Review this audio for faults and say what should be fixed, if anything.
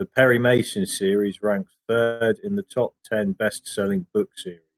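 A call audio freeze runs from 2.03 to 2.26 s, between "series ranks" and "in the top ten". For about 170 ms the last sound is stretched into a fading buzz or hiss, likely because delayed packets emptied the jitter buffer. Nothing is lost; the speech resumes late. On a spectrogram it shows as flat, smeared horizontal bands; on a waveform, a repetitive decaying stretch. Preventing it means a deeper or adaptive jitter buffer and a steadier network path.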